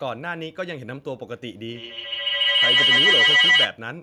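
A microphone-to-loudspeaker loop with more than unity gain takes hold at 1.68 s, the signature of two devices sharing a room on the same call. Each trip round the loop adds level, so the repeats swell rather than decay and collapse onto the frequency the loop favours, around 2 kHz. The result is a feedback howl, with the loop repeating roughly every 150 ms and the howl peaking about 12 dB above the speech, until it breaks off at 3.78 s.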